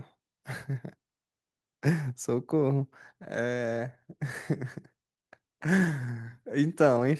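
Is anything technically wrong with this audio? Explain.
No, nothing is technically wrong with this audio.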